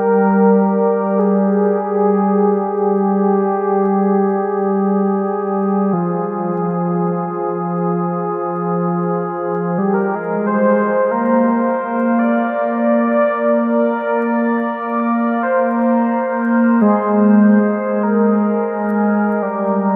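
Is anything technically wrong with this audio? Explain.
No technical faults are audible.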